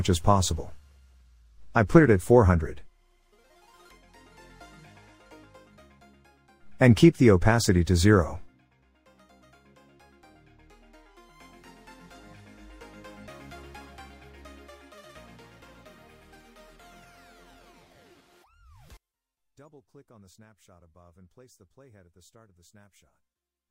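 From 18.97 s to the end, the sound collapses by about 36 dB into a faint residue, likely one channel inverted, so shared content cancels when summed to mono.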